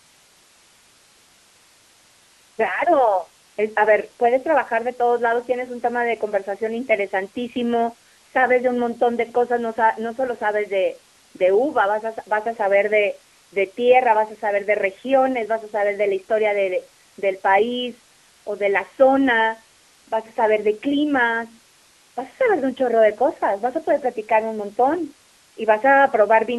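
From start to end, the speech carries AMR narrowband mobile codec damage. Nothing reaches above about 3.4 kHz or below 250 Hz. The voice sounds buzzy and synthetic, plainly so. This fits a low AMR-NB bitrate, around 7.4 kbps, rebuilding the voice from a coarse model.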